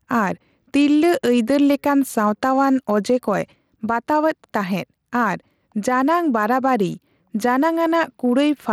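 Throughout the clip the level pumps: it ducks by roughly 5 dB under every louder syllable, pulling loud and soft passages together. This is gain pumping, likely from input gain set too high with a fast limiter clamping each peak.

Across the whole clip there is also plainly audible Bluetooth SBC compression, with gritty, coarsely quantised detail and flickering, unstable treble riding on the speech, though content extends to 21 kHz. The damage points to a bitrate of around 96 kbps, starving the upper sub-bands.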